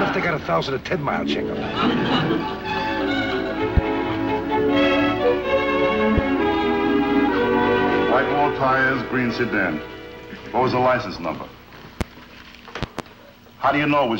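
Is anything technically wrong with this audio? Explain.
Yes. Loud pops occur at 3.77–3.80 s, 6.18–6.21 s, 12.01–12.04 s, and a double pop at 12.83–13.02 s. Each is a sharp thump about 15 dB above the sound, which continues underneath. The likely cause is a voltage step from a switch, plug or static. On the waveform each pop is a tall spike, and on the spectrogram a bright full-height vertical line.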